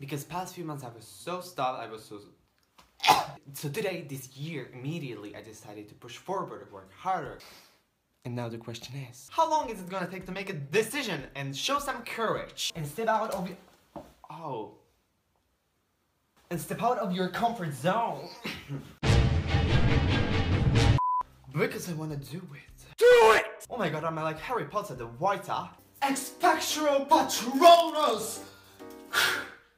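From 27.53 to 28.38 s a block size mismatch (padded) sets in: each block arrives slightly short and is topped up with zeros, giving a 91.5 Hz buzz and playback slowed to 0.996x with timbre unchanged. The waveform shows evenly spaced flat gaps; the spectrogram, fine vertical striping.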